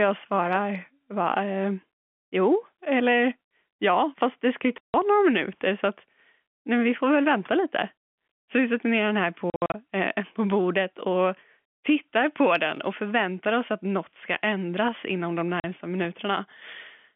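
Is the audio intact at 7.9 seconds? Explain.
Yes, at 7.9 seconds the speech is intact, coming through the 200 Hz to 3.4 kHz G.711 telephone band with no fault.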